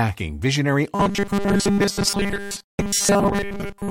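From 0.95 s to the end, the speech collapses into a rigid, metallic buzz fixed at 200 Hz, still loosely tracking the words: robotic sound from repeated short buffers, likely from about 5 ms chunks being replayed over most of the stretch. Unlike a pitch fault, the buzz never moves with intonation.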